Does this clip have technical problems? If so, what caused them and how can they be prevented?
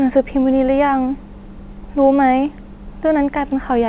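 No, there are no faults.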